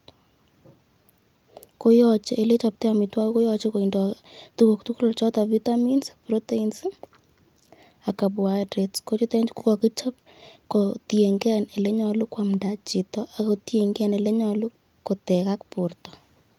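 Nothing goes wrong anywhere in this recording: the speech runs along without a single technical fault turning up at any point.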